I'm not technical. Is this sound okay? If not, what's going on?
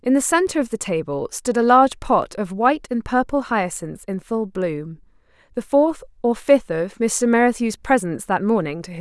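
Yes, nothing wrong can be heard here.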